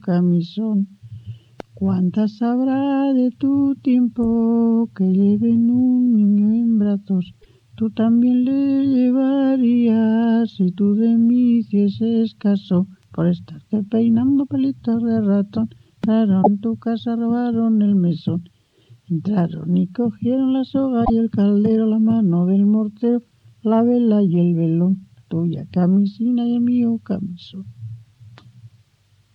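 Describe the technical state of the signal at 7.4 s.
At 7.41 s the audio jumps forward and the next 0.06 s, from 7.41 to 7.46 s, comes out garbled, about two frames of 26.1 ms. This is likely a broken MP3 bit reservoir: after frames went missing, the following frames reached back for borrowed data and decoded bytes belonging to other frames. On a spectrogram it appears as a short disturbance; the waveform shows an abrupt discontinuity.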